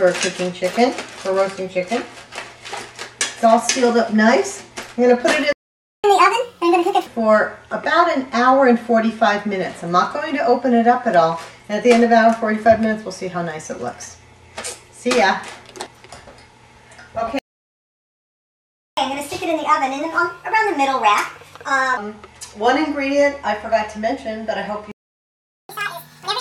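The player likely ran out of buffered data or had its thread blocked, producing a playback stall: the sound cuts out at 5.53 s for 0.51 s, at 17.39 s for 1.59 s, and at 24.92 s for 0.78 s, then resumes. After each stall the player resamples its backlog to catch up at higher speed, so tempo and pitch jump together. From 6.04 to 7.06 s it runs at 1.5 times speed, about 7 semitones high. From 18.97 to 21.97 s it runs at 1.25 times speed, about 4 semitones high. From 25.69 s to the end it runs at double speed, about 10 semitones high.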